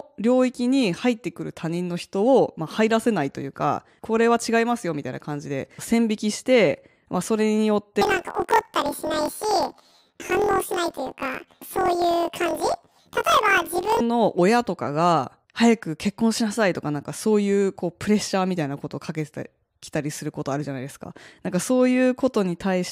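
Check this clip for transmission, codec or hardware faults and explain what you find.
There's one fault, running from 8.01 to 14.01 s: planar audio read as interleaved. Each block stores all the left-channel samples followed by all the right, but it's being read as alternating left-right pairs. So each block plays twice at double speed, left then right, and the overall pace stays intact. The speech jumps up an octave with a flutter at about 43.1 Hz, a repeat every 23.22 ms, which fits a 1024-sample block.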